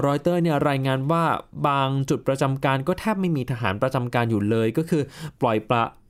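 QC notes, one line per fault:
No faults found in this speech recording.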